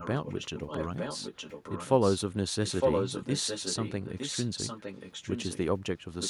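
A delayed copy of the speech trails it by 910 ms from 0.0 to 0.08 s, 0.24 to 2.34 s, 2.66 to 5.58 s and 6.21 s to the end, about 10 dB down but louder, around 5 dB down, in the third stretch: echo leak, likely from a far-end loudspeaker's echo canceller letting its microphone pickup through.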